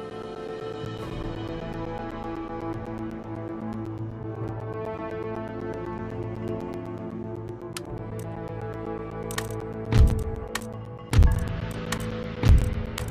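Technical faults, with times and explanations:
0.1 to 12.99 s, periodic USB or driver dropouts: a steady ticking, every 0.125 s (eight per second), audible wherever sound is present. Something stalls the USB bus or audio driver at that fixed interval, and each stall replaces around 10 ms of audio with silence.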